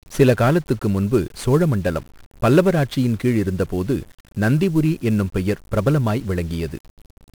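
From start to finish the speech carries 1-bit DFPWM compression with heavy damage. Each sample is reduced to a single up-or-down step on an adaptive level, so the waveform looks like a jagged staircase tracing the speech envelope, and strong broadband quantisation noise results. The speech sounds fuzzy and crackly, its treble buried under hiss, and a spectrogram shows a dense noise floor smeared across all frequencies. The coarseness fits a rate around 48 kbps.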